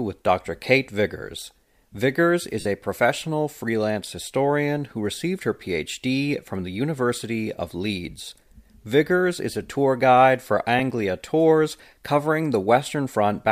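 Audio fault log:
2.60–2.66 s, 8.25–8.32 s and 10.79 s, lost LE Audio frames: the speech briefly turns to a hissy smear as the decoder repeats the last spectrum with scrambled phase, clearest in the 52.5 ms gap at 2.60 s (which fits seven 7.5 ms frames). At 8.25 s about 30 ms goes missing in short bursts across 60 ms, the longest around 15 ms. At 10.79 s a single 7.5 ms dropout makes a tiny blip. On a spectrogram the voice harmonics blur into broadband noise, and the waveform shows a rough, dimming envelope. The speech around these gaps carries a faint grain, likely from light LC3 coding.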